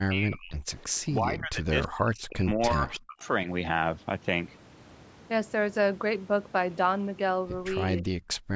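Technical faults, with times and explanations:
0.00–0.56 s, 1.01–3.26 s and 8.02–8.10 s, speech suppressed in double talk: the voice sinks, by roughly 40 dB in the first two stretches and roughly 20 dB in the brief last one, likely because the echo canceller mistook overlapping far-end sound for echo and pulled everything down.
8.38–8.51 s, background gated by the echo canceller: the room sound drops out by about 40 dB for this short moment while loudspeaker output is playing, as the canceller clamps the microphone hard, then returns once it releases.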